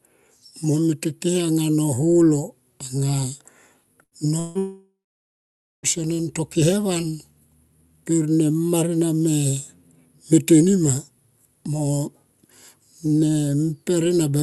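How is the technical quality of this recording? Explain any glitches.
The recording has three network glitches, all between about 4.0 and 5.9 s. The speech passes through a call codec whose top end stops near 12 kHz, which points to Opus at a moderate bitrate.

Burst of packet loss, 4.03 to 4.14 s. A run of packets never arrived in time. The receiver stretched the last sound over the gap and faded it. You hear about 80 ms of held buzz or hiss. The speech then resumes with about 80 ms missing.

Long network dropout, 4.39 to 4.58 s and again 4.59 to 5.86 s. The likely cause is a network stall where no audio arrived. In the first, about 0.16 s is concealed with a fading buzz or hiss and no silence. In the second, a fading fill lasts about 1.24 s, with roughly 0.87 s of it silent. The speech returns with about 1.24 s lost.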